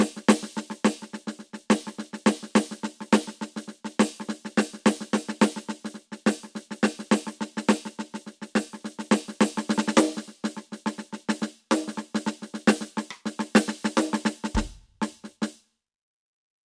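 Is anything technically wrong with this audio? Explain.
No, nothing technically wrong turns up here; the music just comes through as it should, with nothing to flag.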